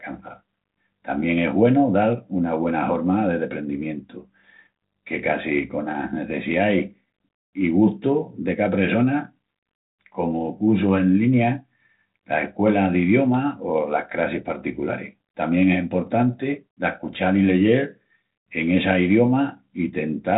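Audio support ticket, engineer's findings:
Nothing stood out on listening; the speech carries the expected narrow telephone band from G.726 ADPCM at 32 kbit/s, topping out near 3.9 kHz, with only light coding texture.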